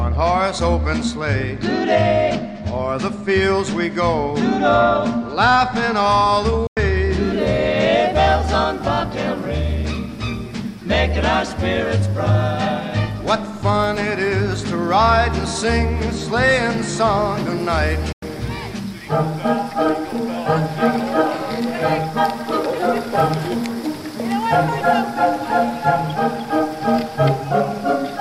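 At 6.67 s and again at 18.12 s, a digital broadcast dropout mutes the audio for about 96 ms. It fades out in about 3 ms, and three frames were lost each time.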